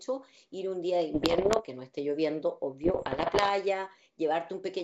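From 1.14 to 1.65 s, the speech breaks into pops and rough bursts. These are bit errors on an ADPCM link, here a G.722 wideband path. Roughly two bits in a hundred arrive flipped. Each bad bit throws off the decoder's step size and predictor, so the damage rings on for some milliseconds and the level jumps briefly. The same crackle returns from 2.84 to 3.51 s, at a slightly lower error rate.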